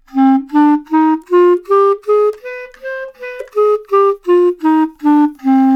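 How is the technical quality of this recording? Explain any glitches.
Listening closely, nothing in the recording stood out as a technical problem, and there are no glitches to explain.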